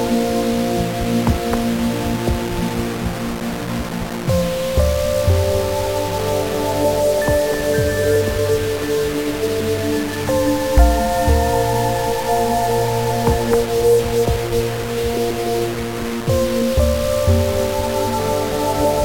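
Grainy, signal-following distortion runs through the whole audio, quiet passages sputtering or dropping out, likely low bit depth without dither, around 4 bits, with error roughly 10 dB below the signal, unlike dither's steady hiss.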